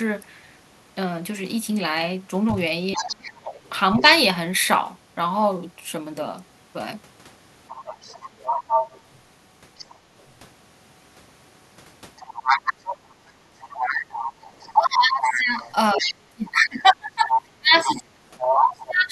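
A speech recording with echo-canceller trouble throughout. The other side's voice leaking through appears four times: 2.93 to 4.03 s at about 15 dB below the talker, 7.69 to 9.95 s and 12.17 to 16.14 s at about 10 dB below, and 17.33 to 18.56 s at only about 5 dB below. This is a second, separate voice running under the talker, most likely far-end audio from a loudspeaker that the canceller did not fully subtract. That sets it apart from room reverberation, which would only smear the talker's own voice. Speech suppressed in double talk hits the talker while that second voice is present. From 2.95 to 4.06 s the voice dips in pieces, by roughly 15 dB at worst, over a few tenths of a second in total. From 14.73 s to the end it is cut much harder, by roughly 25 dB at worst, over about 3 s in total. The likely cause is the canceller failing to tell the two talkers apart and turning both down. 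Unlike a network dropout, the losses line up with the overlap rather than falling at random. Background gated by the echo canceller appears as a brief dip in the room sound itself, from 13.47 to 13.58 s, about 9 dB deep and lasting roughly a tenth of a second, before the ambience returns. Because the background falls away on its own, with no speech being cut, it differs from the double-talk suppression.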